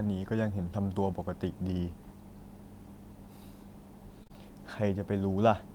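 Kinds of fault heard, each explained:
Short concealed packet loss: two chunks of this speech, each about 20 ms, arrived too late for the decoder, one right after the other around 4.23 to 4.31 s. The receiver papered over each gap by stretching what came just before, keeping the pitch going on voiced bits and using shaped noise on unvoiced ones, then faded back into the real signal. With two in a row, you get a brief smear or wobble lasting under a tenth of a second.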